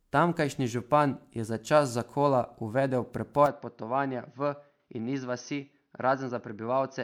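Throughout, the speech was likely passed through MP3 coding about five times, consistent with 128 kbit/s, producing generation loss: swirly, hollow smearing and blurred consonant attacks. At 3.46 s, the input likely switched to a poorer device, which cuts everything above 6.4 kHz. From there to the end the speech turns duller and drops roughly 5 dB, with no gap at the switch and faint added noise.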